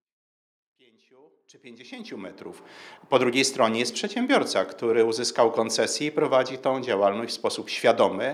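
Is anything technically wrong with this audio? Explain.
No, nothing here points to a technical problem. The level rises in a smooth fade from the very beginning until about 2.69 s, with no click or hard edge.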